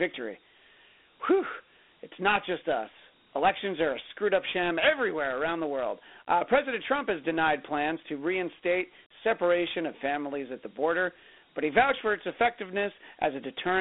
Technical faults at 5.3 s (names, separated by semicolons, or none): Dialogic VOX ADPCM